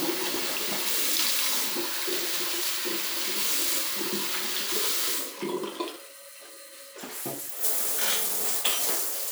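At 0.30 s there's a brief jumbled stutter, chunks out of order. A 20 ms slice of audio turned up two chunks late and plays after the material meant to follow it, so 0.30 to 0.36 s comes out scrambled. The same thing happens at 5.92 s, this time one chunk late, giving a shorter garbled blip that ends by 5.96 s.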